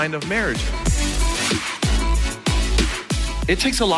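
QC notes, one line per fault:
No faults heard anywhere in the clip.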